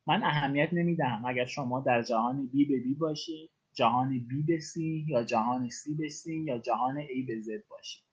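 Speech, carried over a call path with Opus-style coding, with two timing problems. A short stall from a late packet at 0.37 to 0.43 s holds the sound for about 40 ms and then resumes at the same point. Because nothing is skipped, this is a stall, not a dropout. Clock drift between sender and receiver, with the sender running roughly 3% slow, makes the receiver make repeated timing corrections from 1.6 s to 8.05 s. It keeps repeating small slices, at uneven intervals and always in the same direction, adding about a fifth of a second in total and playing at about 97% speed. The result is a string of small, spread-out corrections rather than one isolated hold.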